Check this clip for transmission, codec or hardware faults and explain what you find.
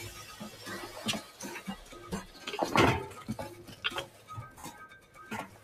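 Three kinds of fault are present: a speech noise suppressor running on non-speech sound, two bursts of lost LE Audio frames, and two spots where that suppressor cuts the sound harder.

Noise suppressor applied to music or sounds, throughout. The suppressor is tuned for speech. It treats steady tones, ambience and reverb as noise. It pulls them down while attacks get through. Level swings by roughly 10 dB as it opens and closes. Held sounds sink and tails vanish early. The result is a pumping, fluttering, thinned-out texture across the whole clip.

Lost LE Audio frames, at 2.60 to 2.68 s and at 4.59 to 4.64 s. The first event loses 40 ms, scattered over 80 ms, with the longest run around 20 ms. The second loses 50 ms in one stretch, which fits 10 ms frames. The LC3 decoder fills each gap by repeating the last spectrum with random signs. Tonal content turns into a brief noisy smear. In the longer gap it fades toward silence before the signal returns.

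Sound cut by the noise suppressor, at 4.08 to 4.29 s and at 5.00 to 5.17 s. Here the suppressor judged the sound to be noise and cut deeper than elsewhere. The drop reaches about 6 dB in the first spot and about 7 dB in the second. Steady and decaying parts sink most, and decays end abruptly. Sudden onsets pass almost untouched, so the sound briefly dips and hollows.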